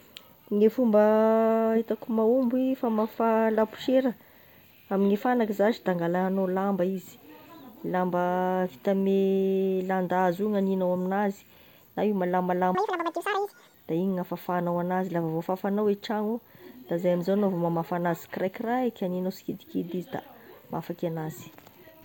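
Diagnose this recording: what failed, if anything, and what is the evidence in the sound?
Between 12.75 and 13.74 s the speech jumps to twice its normal speed and an octave higher: audio read two samples at a time (double speed). This is a sample-format conversion fault. The reader treats each pair of samples as one frame, which halves the playback time.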